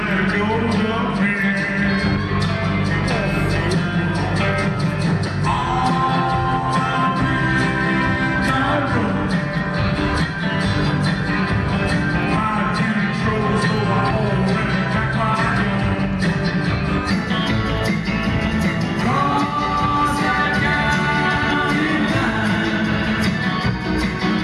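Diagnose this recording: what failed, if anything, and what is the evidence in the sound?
A section at the wrong speed runs from 0.0 to 17.11 s: the audio plays at 0.893 times its proper rate, so everything sounds slower and about two semitones lower, then snaps up to normal pitch and tempo at 17.11 s. The likely cause is a playback or editing stage resampling that segment against the wrong clock. On a spectrogram, every harmonic band sits roughly 11% lower before 17.11 s and steps upward at the boundary. The waveform's events look correspondingly stretched in time.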